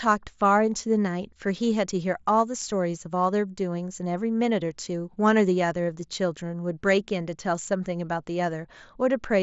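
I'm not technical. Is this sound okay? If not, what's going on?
Yes, nothing in this speech recording has gone wrong. It was carried over a Bluetooth headset link using the mSBC headset codec, which keeps the voice's range up to about 8 kHz and leaves only a faint graininess on the louder moments.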